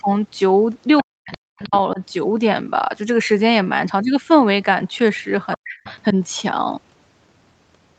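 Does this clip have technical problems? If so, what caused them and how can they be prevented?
Yes. The talker's voice dips hard from 1.01 to 1.74 s, again briefly at 1.93 to 2.00 s, and from 5.55 to 5.85 s. The first and last drops go nearly silent, and the middle one is a milder dip. That's speech suppressed in double talk, likely the echo canceller hearing both sides at once and ducking everything it couldn't separate. Tuning the canceller to hold full-duplex better, or using a headset, prevents it.

Overlapping those dips, the other side's voice leaks through in short scraps at 0.98 to 1.03 s, 1.33 to 1.38 s and 1.63 to 1.78 s, sitting roughly 20 dB under the talker. There's a longer, slightly louder stretch from 5.66 to 5.96 s, about 15 dB down. The far end's audio is playing from a loudspeaker and getting back into the mic, and residual echo that the canceller didn't fully remove is the probable reason. 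A headset or better speaker-to-mic isolation would stop it, within the call path's usual 8 kHz top end.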